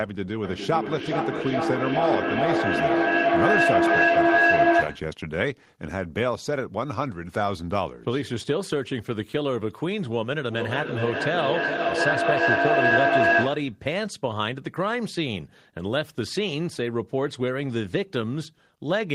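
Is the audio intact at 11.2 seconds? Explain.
No, a tone near 700 Hz swells from 10.5 to 13.81 s, with a loop delay of about 400 ms, peaking about 6 dB above the speech. This is feedback howl: sound loops between microphone and loudspeaker, gaining level each pass.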